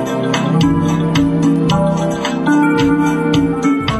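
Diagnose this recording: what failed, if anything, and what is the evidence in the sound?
Nothing seems to have failed here; I can't hear any sign of trouble at any stage of the chain, so there's no evidence to point to.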